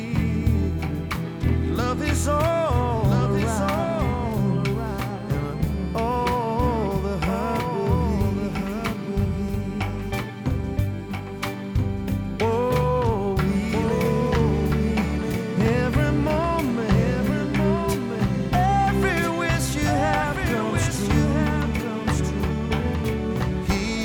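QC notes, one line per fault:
Throughout, doubled audio track: a second full-band copy of the sound trails the original by about a second and a half, roughly 5 dB quieter, with no decay or room colour, likely from the signal being captured again through a slower path.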